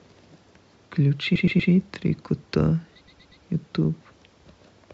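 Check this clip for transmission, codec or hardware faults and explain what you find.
The speech stutters twice, from 1.35 to 1.71 s and again from 3.07 to 3.43 s. In each place the same 120 ms stretch plays four times in a row, adding 360 ms. This is repeated frames: a block of compressed audio, which fits a run of six codec frames, was written or sent more than once, so the decoder replays it before moving on.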